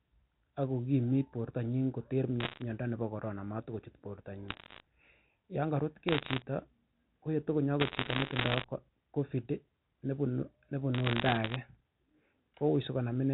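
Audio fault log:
2.40–2.62 s, 4.48–4.80 s, 6.08–6.42 s, 7.80–8.64 s and 10.94–11.56 s: bit errors on a digital phone line. Bits flipped at roughly 0.7 to 1.5 percent in the G.711 stream, each corrupting one sample. Hits on sign or high bits give sharp ticks, heard as crackle over otherwise unchanged speech, starting just after "ak kokimit bortanyin koter". The longest burst is near 8 s.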